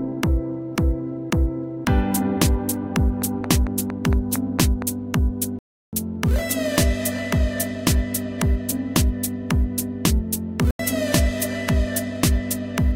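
A recording of everyday sounds. From 3.22 to 4.83 s a train of clicks ticks over it at a regular 4.4 per second, about seven pops standing roughly 10 dB above the surrounding sound, likely interference or a faulty connection or supply. At 5.59 to 5.93 s and again at 10.64 to 10.80 s the sound drops abruptly into silence for 0.34 s and 0.15 s. These are corrupt frames muted: the decoder rejected damaged compressed frames and the player filled their span with silence, the lengths fitting a run of several frames and then a couple.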